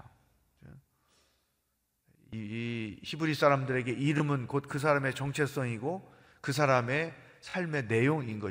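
At 4.18 to 4.20 s a repeated buffer appears: playback ran short of fresh audio, so the device replayed its last block once. The repeat spacing fits a 20 ms buffer, and about 20 ms of real sound goes missing. At 7.50 to 7.54 s the same block plays twice more, costing around 40 ms and giving a brief buzzy stutter. What separates this from a dropout is that each hard join is followed by copied sound rather than a silent gap.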